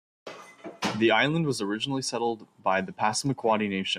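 No technical faults can be heard in this speech clip. Nothing at any point in the recording stands out as going wrong.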